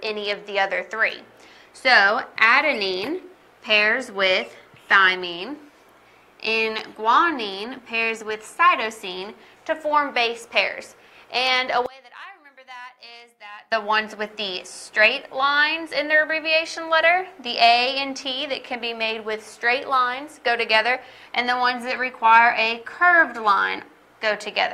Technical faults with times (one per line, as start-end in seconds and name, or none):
11.86-13.72 one channel inverted